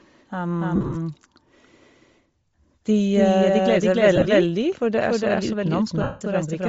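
Doubled audio track runs throughout this speech: a second, full-band copy at about the same level trails the original by roughly 300 ms, with no decay or room colouring, so every syllable is echoed cleanly. An edit or a second capture path is the likely cause. Bluetooth LC3 compression is also present for the whole clip and plainly audible. The upper spectrum is thinned and filled with noise, giving the speech a breathy, grainy edge. That fits LC3 running at a low bitrate near 32 kbps with short 7.5 ms frames. Lost LE Audio frames break the sound at 0.76–0.96 s, 4.16–4.26 s and 6.03–6.21 s. At each point the decoder repeats the last spectrum with scrambled phase. The first two dropouts are scattered bursts, with the longest runs around 50 ms and 20 ms. The last is a solid gap of about 180 ms that fades away toward silence.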